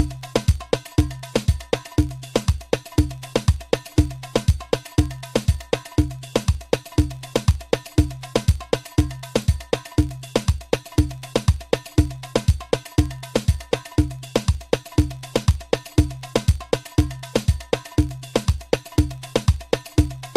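Throughout the clip, a filter is restarted on every block. It loses its state and starts each block from silence. Each restart leaves a small transient. Together they form a buzz at about 46.9 Hz that rises and falls with the sound's level, which fits a 1024-sample block.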